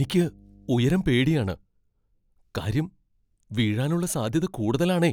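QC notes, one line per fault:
0.0–1.5 s, mains hum: a steady, fixed-pitch 50 Hz tone sits roughly 30 dB below the speech, as power-line energy leaks in through a ground loop or nearby transformer. Unlike broadband rumble, it holds one exact pitch, then stops at 1.5 s.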